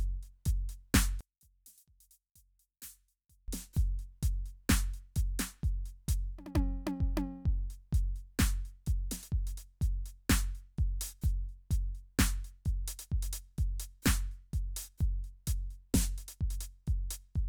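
From 1.21 to 3.48 s the music collapses by about 27 dB, with centred material nearly gone and only a faint residue of the stereo difference left. The likely cause is one channel inverted, cancelling everything common to both sides when summed.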